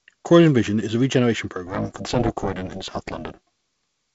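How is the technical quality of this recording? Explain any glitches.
One clear glitch, set against wideband telephone-style sound that stops near 7.7 kHz and fits G.722 coding. From 1.67 to 3.68 s, just after "is a regeneration", the sound takes on a metallic buzz with extra tones around each note. This is overlap-add ripple: windowed frames were recombined with gains that don't sum evenly, so the level pulses around 400 times a second, dipping by about 60 dB.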